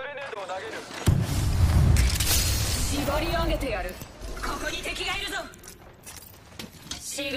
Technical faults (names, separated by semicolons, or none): corrupt frame concealed